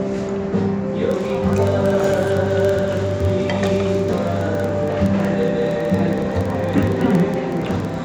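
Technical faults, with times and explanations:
1.12 to 8.04 s, filter restarted on every block: a 21.5 Hz ticking buzz that follows the level, from each block starting from silence; this fits 2048-sample blocks.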